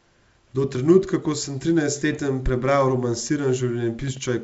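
Pops and rough, level-jumping bursts at 2.13 to 2.20 s, just after "trenutka ko sem", and at 4.02 to 4.21 s are bit errors on an ADPCM link. Flipped bits derail the G.722 decoder's step size and predictor.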